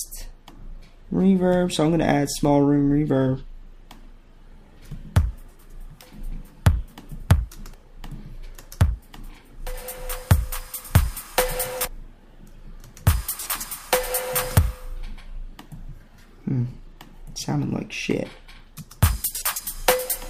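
No technical faults are audible.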